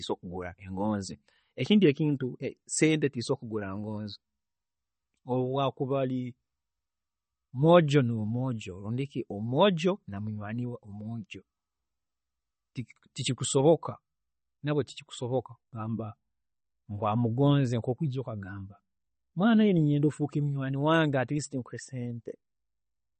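MP3 compression damage runs throughout the clip, from start to finish. Nothing in the speech reaches above 8.4 kHz, so the top end is sliced off flat, and the degradation is plainly audible: a watery, swirling quality as quieter frequency components flicker in and out between frames, with s sounds turning metallic and consonant onsets smeared. This most likely comes from an encoder starved of bits, which fits a bitrate around 32 kbps.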